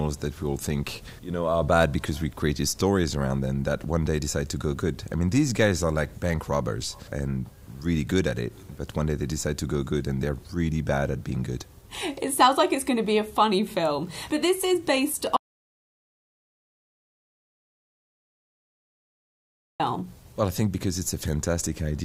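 From 15.37 to 19.80 s the sound cuts to silence for 4.43 s, an audio dropout to silence, likely from a lost input; unlike a quiet pause, no room tone remains.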